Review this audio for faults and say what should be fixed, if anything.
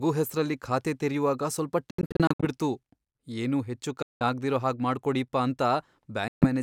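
Three stretches of silence cut into the speech: 1.91 to 2.46 s, 4.02 to 4.23 s just before "ಆಗ್ದಿರೋ ಹಾಗ್ ಮಾಡ್ಕೊಡೀಪ್ಪ", and 6.28 to 6.47 s. The first is several short gaps, the longest 76 ms. Each time, the speech resumes further on, as if it kept playing. This is likely a Bluetooth dropout. Late packets were discarded by the headphones. Keeping the wireless link short and unobstructed prevents it.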